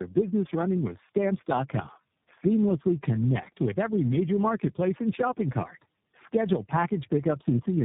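From start to finish the speech carries tandem speech coding: it sounds as if it passed through three low-rate speech coders in a row, which points to two G.729A stages and a final iLBC stage joined by G.711 links. Each coder re-encodes the previous one's errors, so the voice is rougher, more muffled and more warbly than one codec would leave it. Plain band-limiting would only dull it, with nothing above 3.7 kHz here, but would not add the stacked grit and wobble.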